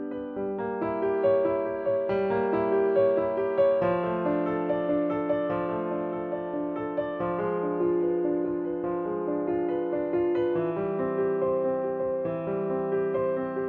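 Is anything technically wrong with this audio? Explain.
No, nothing is technically wrong with this audio.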